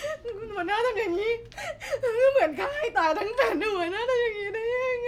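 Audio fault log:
3.41 s, corrupt frame decoded: damaged bits in a single compressed frame were decoded anyway, so a brief chirp or blip peaking around -15 dBFS appears as a short vertical smear on the spectrogram.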